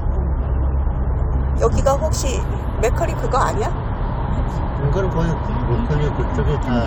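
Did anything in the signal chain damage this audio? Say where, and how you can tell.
No, nothing in the signal chain audibly damaged this recording of everyday sounds, and no stage shows evidence of trouble.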